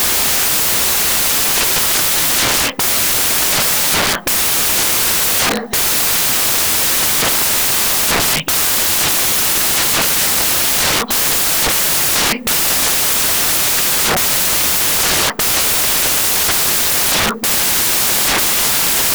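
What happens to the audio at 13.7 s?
At 13.7 s you're hearing the same thing that runs through the whole clip: samples built from the wrong bytes. The reader is assembling each sample badly, either a byte off, in swapped order or with the wrong alignment, so the jittery low-order bits end up acting as the big part of every value. What comes out is loud, harsh broadband noise.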